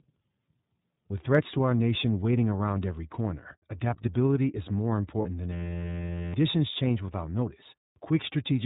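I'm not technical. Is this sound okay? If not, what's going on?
No, there are three problems.

iLBC codec, throughout: the speech went through iLBC, a low-quality internet-phone codec that discards everything above 4 kHz and rebuilds the voice in short chunks. That's why the whole clip sounds muffled, slightly rough and a bit synthetic.

Lost iLBC frames, 5.22 to 5.26 s: one 30 ms chunk of sound never arrived. The decoder filled the gap by repeating the last bit of voice mixed with noise, so you hear a brief buzzy, held sound before normal speech resumes almost at once.

System hang loop, 5.53 to 6.34 s: the computer briefly froze while the sound hardware kept replaying the same tiny 11.6 ms scrap of audio, which fits a 512-sample buffer. Repeating about 86 times a second, it becomes a steady buzz, and nearly three quarters of a second of speech is lost.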